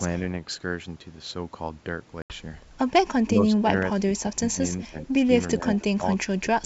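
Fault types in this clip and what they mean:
Packet loss on an ADPCM call: about 80 ms of audio, consistent with roughly four packets, drops to hard-edged silence from 2.22 to 2.33 s. The decoder's adaptive predictor and step size lose sync with the sender's, so the sound comes back disturbed and settles over some tens of milliseconds.
Speech suppressed in double talk: the speech dips by about 10 to 20 dB in four stretches, 3.25 to 3.68 s, 3.85 to 4.62 s, 4.81 to 5.33 s and 5.58 to 6.65 s. This is likely an echo canceller attenuating this talker while confusing it with far-end echo.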